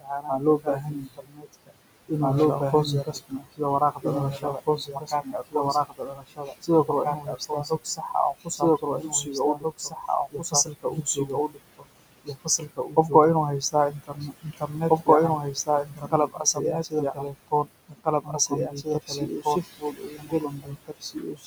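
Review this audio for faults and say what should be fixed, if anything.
A doubled audio track runs throughout: the same signal is likely being mixed in twice, with a second full-band copy trailing about two seconds behind at roughly equal level. Every phrase gets a dry, uncoloured repeat. Route the source through a single path so only one copy reaches the mix.

Noise suppressor artifacts are present for the whole clip. The suppressor pulls down the bands it judges to be steady noise by about 21 dB, frame by frame, so the room noise, originally about 15 dB under the speech, pumps down in gaps and surfaces under talking. Use gentler suppression or reduce the noise at the microphone instead.

Speech cut by the noise suppressor appears from 0.00 to 1.72 s, 3.04 to 13.12 s, 13.61 to 15.08 s, and 15.42 s to the end. Quiet consonants and word tails are mistaken for noise and dropped by up to about 22 dB, swallowing roughly a second, four seconds, under a second and three seconds of speech respectively. 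Lower the suppressor's aggressiveness or protect speech-band detail so soft syllables survive.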